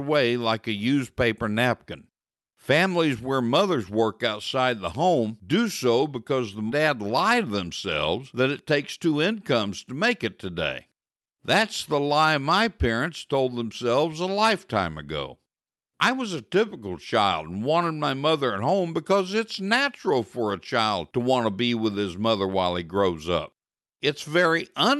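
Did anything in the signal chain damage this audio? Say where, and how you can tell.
Yes. At the network and jitter buffer stage, there is a skip ahead at 6.69 s, right after "do so because the". Roughly 0.4 s of audio is missing, with no fill, and the two sides are butted together. The audio was dropped, either in transit or by the buffer when it overflowed, while later audio was already waiting.

The jitter buffer speed-up follows immediately, from 6.79 to 7.65 s at 113% speed and again from 8.19 to 9.33 s at 108%, ending before "to make it today". Pitch stays the same while the delivery sounds hurried. Each pass trims around a tenth of a second by removing pitch-period pieces.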